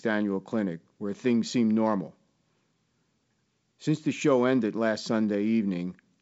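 No faults turn up anywhere in this speech clip; it just carries the usual signature of G.722 wideband telephone coding, with nothing above about 7.7 kHz.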